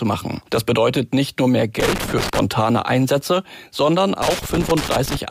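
Loose connector crackle appears from 1.8 to 2.39 s and again from 4.22 to 5.17 s. Somewhere in the signal chain a worn or dirty contact is shifting, so the connection keeps opening and closing faster than the ear can follow. Each break chops the audio, and any DC present on the line turns the transitions into small pops. The result is an irregular, scratchy burst, about 0.6 s the first time and nearly a second the second.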